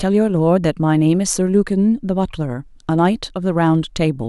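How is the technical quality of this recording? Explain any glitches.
No audible glitches or faults.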